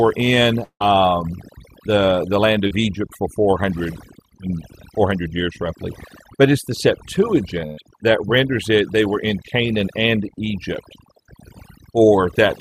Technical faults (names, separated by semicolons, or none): overdone noise removal; long network dropout; short concealed packet loss; burst of packet loss